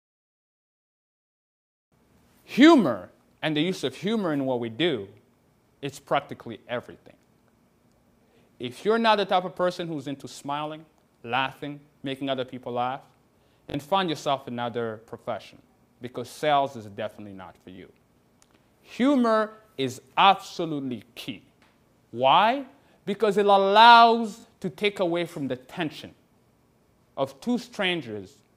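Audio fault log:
13.70–13.74, 15.24, 17.76 and 24.40–24.44 s: repeated buffer. New audio arrived late, so the last block played again, twice at 13.70 and 24.40 s, once elsewhere. Each repeat is short, fitting a 20 ms buffer. Hard joins make brief buzzy stutters.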